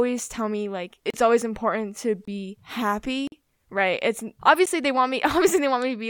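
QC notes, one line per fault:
1.10–1.14 s, block of digital silence: the output went to zeros for about 35 ms between "tell me like" and "always important to", leaving a short hole.
2.25–2.28 s, block of digital silence: a 23 ms stretch was zeroed, which fits an unfilled 1024-sample buffer, so the sound drops out abruptly.
3.27–3.32 s, block of digital silence: about 46 ms was zeroed just before "right it's", which fits a 2048-sample buffer, giving an audible gap.
4.66 s, block of digital silence: a 12 ms run of zeros between "right it's" and "they want", fitting a 512-sample buffer, is too short to hear as a gap and sounds like a tick.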